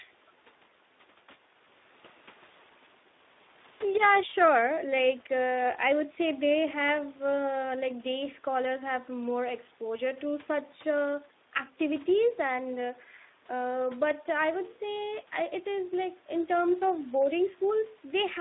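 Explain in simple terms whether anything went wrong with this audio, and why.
Speex codec, throughout the clip: this old voice-chat codec kept only a narrow, phone-like range of sound and too little fine detail, so the speech sounds plainly rough.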